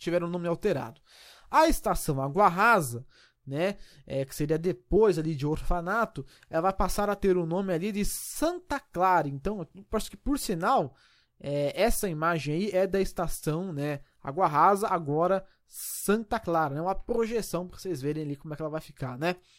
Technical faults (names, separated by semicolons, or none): compressed frames skipped